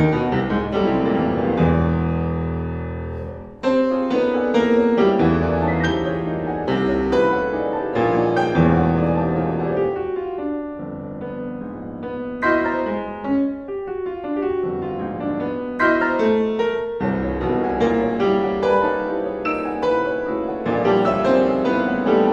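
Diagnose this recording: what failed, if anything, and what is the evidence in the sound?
Nothing failed: no stage in the chain leaves a defect audible in this recording.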